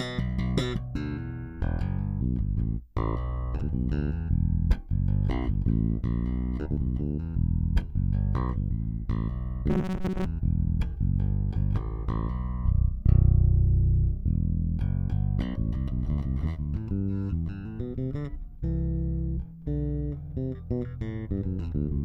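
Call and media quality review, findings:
Robotic sound from repeated short buffers, 9.7 to 10.28 s. Likely buffer underrun in the playback path: a roughly 5.3 ms block replayed while most fresh audio is skipped. The sound becomes a rigid metallic buzz at 188 Hz.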